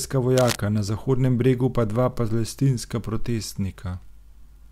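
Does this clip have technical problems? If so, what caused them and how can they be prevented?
Yes. A worn cable or connector likely moved, its contact resistance jumping erratically, causing cable scratch noise from 0.37 to 0.56 s: a rough scratching burst only slightly quieter than the speech. Replacing worn leads and securing cables so they cannot shift while recording prevents this.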